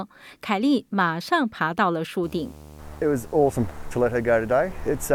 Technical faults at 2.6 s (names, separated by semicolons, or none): video or display buzz